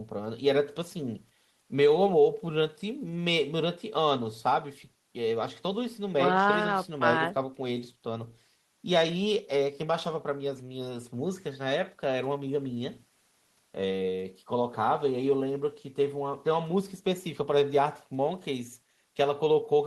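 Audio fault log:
No fault found in this audio.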